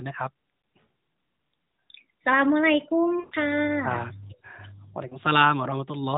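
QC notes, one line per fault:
0.62–0.64 s, 3.20–3.35 s, 5.08–5.18 s, lost AMR speech frames: brief warbly dips, with the middle one smeared and fading toward silence (consistent with about six frames). The decoder repeats the last good parameters with falling gain.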